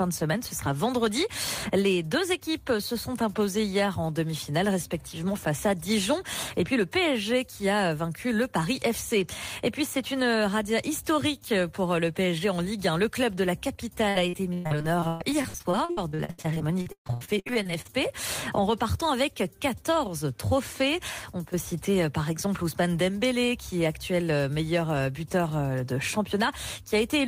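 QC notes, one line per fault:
14.09–17.90 s, repeated packet loss (robotic sound): packets went missing again and again, and each hole was patched by stretching the last sound, so about 37% of this stretch is filler. Some three dozen short gaps, the longest 138 ms, leave the sound choppy, with pieces missing.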